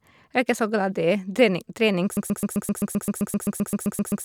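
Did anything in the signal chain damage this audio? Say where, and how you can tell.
Yes. From 2.17 s to the end of the speech, a 130 ms fragment repeats back to back about sixteen times: a broken-record loop. This points to a stall at the buffer or playback stage, likely, which kept resending its last fragment. The speech that should follow is lost.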